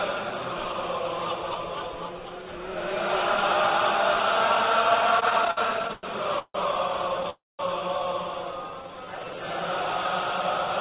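From 5.2 to 6.56 s you get repeated stalls, a stutter. The audio keeps catching and dragging nine times in a row, with each hiccup filled in by stretching out whatever was just playing, the longest about 154 ms. Packets were arriving late or too slowly, so the jitter buffer kept running dry and the receiver papered over the holes. About 28% of that stretch is filler, around 383 ms in total, but nothing actually drops out. It just lurches along.

At 7.3 s there's a call audio freeze lasting until 7.61 s. The last bit of sound hangs on as a fading buzz and then goes quiet for about 200 ms before picking up again right where it left off. That's likely packets held up in transit emptying the buffer, so roughly 0.29 s of gap gets inserted into the audio rather than anything being lost, and the playback delay grows by the same amount afterwards.

Then from 8.57 to 9.37 s there's a jitter buffer slow-down. 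The pitch stays put, but the sound runs at about 86% speed, with things drawn out. The buffer was rebuilding its reserve by repeating single pitch periods over and over, which adds about 115 ms to that passage. Throughout, there's nothing above 4 kHz, which fits a call path using G.711 mu-law.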